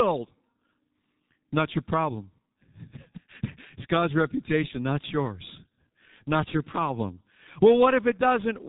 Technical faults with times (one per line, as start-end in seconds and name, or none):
0.00-8.68 G.723.1 codec